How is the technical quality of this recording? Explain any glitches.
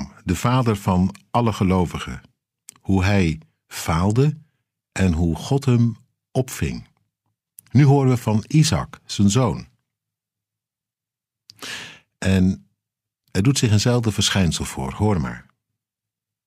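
The recording has no audible glitches. There is nothing to explain, since the speech runs without any interruption or disturbance a listener would notice.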